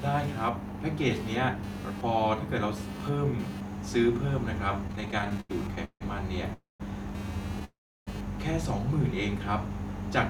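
Throughout the speech runs computer activity noise: a buzz pulsing at around 200 Hz, roughly 25 dB below the speech, as processor or graphics load shifts the shared audio ground. On a spectrogram it shows as faint harmonic lines independent of the speech.

From 4.87 to 6.02 s come repeated stalls (stutter). The jitter buffer ran dry sixteen times, and each gap was filled by stretching the last sound, the longest lasting 160 ms. About a third of that span is concealed audio, so the speech drags and stutters. The waveform shows smeared, repetitive stretches.

Two call audio freezes follow, at 6.53 to 6.82 s and 7.65 to 8.09 s, the likely cause being packets held up in transit. Each continues the last sound as a fading buzz that falls to silence, for 160 ms and then 340 ms, before the speech resumes, now 262 and 421 ms late. These appear as flat gaps in the waveform.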